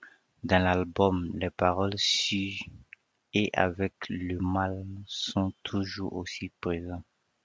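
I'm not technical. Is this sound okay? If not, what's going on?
Yes, the sound is technically fine: it has passed through the usual microphone processing of a phone or video call, which trims away the deepest bass and leaves nothing above about 8 kHz, and that is normal for a call.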